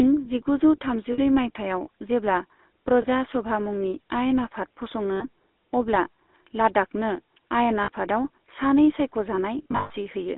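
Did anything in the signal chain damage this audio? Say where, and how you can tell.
Yes. The codec stage damaged it. The whole clip carries the buzzy, gravelly roughness of the GSM full-rate codec, and the damage is plainly audible. The line band runs only from about 250 Hz to 3.7 kHz. That fits a 13 kbps GSM full-rate stream. The codec rebuilds the voice from a vocal-tract model driven by sparse, regularly spaced pulses. That coarse excitation is what puts the grit into every sound.

The network path also introduced lost GSM frames. Each loss is heard as a short metallic ring, where the last good frame is held. The first runs from 1.12 to 1.19 s, just before "माइथायाव जेब्ला". The next is 3.02 to 3.07 s, just before "सभा मुंनि आयेन आफाद". Then 5.16 to 5.25 s, and 7.84 to 7.89 s, just after "अब्ला लाद्दाखनो आयेन". The worst is 9.58 to 9.91 s, with scattered losses totalling 240 ms and the longest run around 150 ms.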